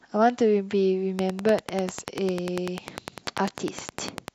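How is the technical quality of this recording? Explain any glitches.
Quality is compromised by one fault. From 1.19 to 4.29 s a train of clicks runs at a steady 10 per second, about 30 in all, peaking around 15 dB above the speech. The uniform, regularly spaced pulses likely come from electrical interference or a faulty connection or power supply. They are heard as sharp ticking over the speech and through its pauses.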